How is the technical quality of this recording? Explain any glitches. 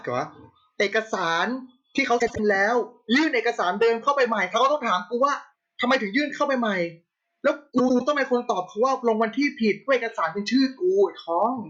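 Two brief glitches break the speech, from 2.19 to 2.39 s and from 7.78 to 8.01 s. Each sounds like a garbled flutter, and no time goes missing. The cause is frames out of order: two adjacent blocks, each about 78 ms long in the first glitch and 105 ms long in the second, were decoded in swapped order, which points to runs of three and four frames.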